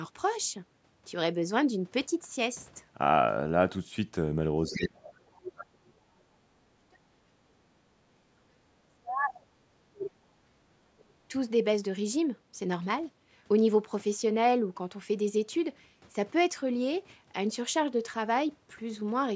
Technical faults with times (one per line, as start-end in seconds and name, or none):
4.65-7.76 speech suppressed in double talk
4.72-4.89 other side's voice leaking through
5.37-5.52 other side's voice leaking through
8.11-10.54 speech suppressed in double talk
10.80-11.32 speech suppressed in double talk